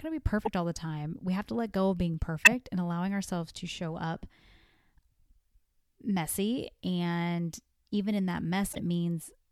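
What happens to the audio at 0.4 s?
A corrupt frame decoded, from 0.41 to 0.48 s, breaks into the speech. Damaged bits in a compressed frame were read as if valid, so the decoder rebuilt that stretch with wrong gains and misread spectral codes and placed energy at frequencies where none belonged. The error spans about two frames and peaks fairly loud, around -15 dBFS, so the 66 ms span is heard as a short, harsh chirp or burst of noise.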